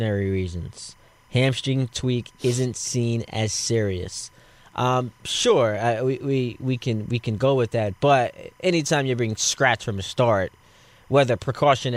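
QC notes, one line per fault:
Throughout, timecode bleed: a faint chirping warble about 35 dB under the speech, alternating near 1 and 2 kHz, as 25-frame linear timecode leaks in from an adjacent line.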